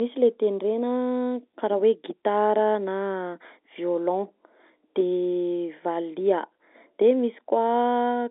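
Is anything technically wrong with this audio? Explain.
No, nothing technically wrong.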